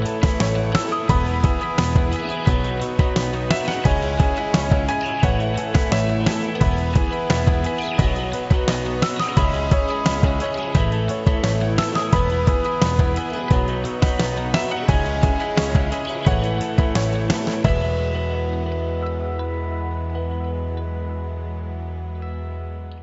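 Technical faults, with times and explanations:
No technical faults are audible.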